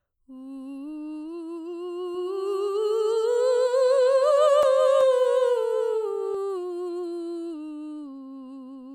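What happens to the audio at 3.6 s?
At 3.6 s the music carries a doubled audio track, running from 2.15 to 6.35 s. A second full-band copy trails the original by around 400 ms at roughly 5 dB lower, with no decay or room colour. It likely comes from a slower capture path.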